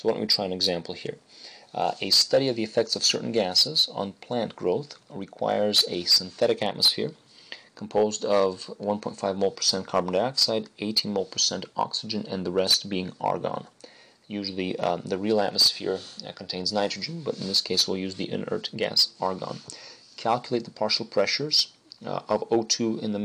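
Nothing in this audio calls for comment; at no point does anything go wrong that would need a time or a cause.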